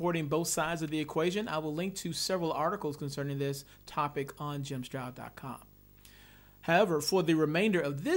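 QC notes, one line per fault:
Throughout: video or display buzz. A steady 50 Hz buzz sits under the speech from start to end, with a gritty hash spread above it. A thin, very high whine at 15.6 kHz rides on top. The buzz is a field-rate signal from a screen or video cable leaking into the audio path. The whine is its line-rate tone. The interference sits roughly 25 dB below the speech.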